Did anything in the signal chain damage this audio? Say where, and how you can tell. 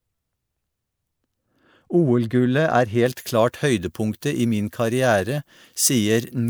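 Yes. From 3.06 s to the end, pre-emphasis was left on: a 75 µs FM treble boost went through transmission without its matching de-emphasis. Around 10 kHz sits about 14 dB above 1 kHz, so the speech turns thin, bright and sibilant.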